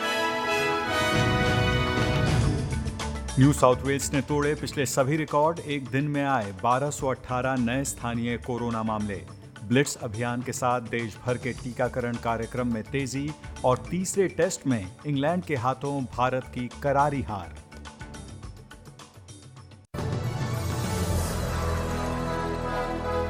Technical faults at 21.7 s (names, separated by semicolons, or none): none